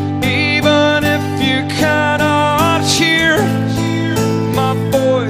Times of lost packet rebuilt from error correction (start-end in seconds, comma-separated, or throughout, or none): none